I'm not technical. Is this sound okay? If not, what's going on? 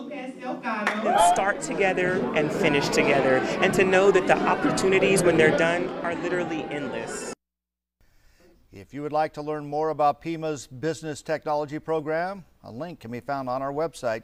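Yes, the signal is in sound technical shape, with nothing going wrong that a listener would need to worry about.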